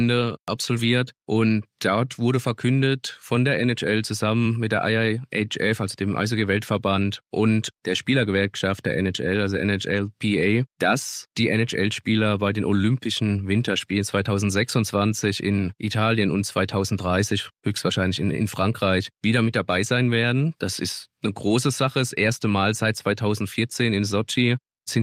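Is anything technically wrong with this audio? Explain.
No, nothing technically wrong can be heard here.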